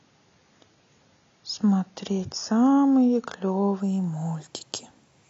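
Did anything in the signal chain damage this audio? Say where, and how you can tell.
Yes. From the start to 3.8 s the speech sounds dull and smeared, with thin treble and stronger codec artefacts, then suddenly clears with no gap. This is an adaptive stream starting at a low bitrate, consistent with AAC-LC stepping from 24 to 96 kbit/s once the player had measured the connection.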